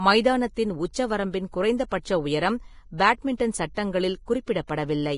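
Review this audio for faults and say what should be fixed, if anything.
Vorbis compression, throughout the clip: the speech has nothing above 10.5 kHz, and the remaining treble sounds hissy and grainy, with roughened tones and smeared consonant attacks. This is likely heavy Vorbis coding, where coarse quantisation turns fine high-frequency detail into noise, which points to a bitrate near 28 kbps. Encode at a higher Vorbis quality setting, or keep an uncompressed or lossless master for delivery.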